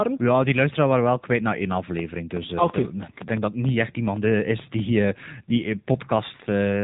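Throughout, the speech sounds buzzy and synthetic, with nothing above 3.8 kHz. This is AMR narrowband mobile codec damage. The speech has been squeezed into a coarse vocal-tract model at a low rate, which fits AMR-NB at about 7.4 kbps.

From 1.72 s to 4.80 s, a train of clicks ticks and pops over the speech and into its pauses. There are about fifteen similar pulses, roughly 5.2 per second at uneven spacing, peaking around 10 dB above the speech. They likely come from nearby electrical interference or a struggling interface.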